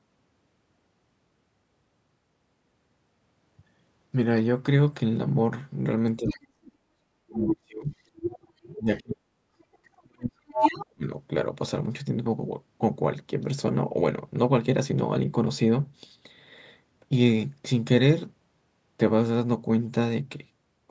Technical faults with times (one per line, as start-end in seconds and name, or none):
6.18-7.87 speech suppressed in double talk
6.27-6.36 other side's voice leaking through
7.48-8.99 other side's voice leaking through
8.74-11.10 speech suppressed in double talk
9.73-9.78 other side's voice leaking through
10.48-10.86 other side's voice leaking through